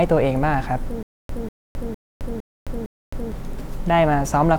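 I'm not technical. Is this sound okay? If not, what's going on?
No. Stutter with silent gaps, 1.03 to 3.32 s: a 0.19 s snippet repeats five times between 0.26 s silences, likely a stalling player.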